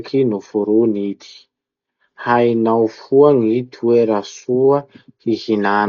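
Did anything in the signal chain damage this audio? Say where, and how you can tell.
Yes, at the codec stage: Dolby Digital compression is the likely cause of heavy damage running through the whole speech clip. Nothing survives above 6.9 kHz, so the sound is dull and boxed-in, and a rough, fluttering noise clings to voiced tones. At the very low bitrate this points to, around 40 kbps, the encoder narrows the band and leaves many frequency lines without mantissa bits, and the decoder fills those gaps with dither noise.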